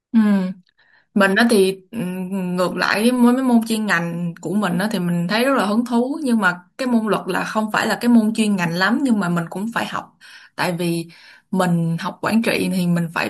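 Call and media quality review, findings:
No audible faults found in this speech recording; no dropouts, distortion, timing or level problems to report against any component.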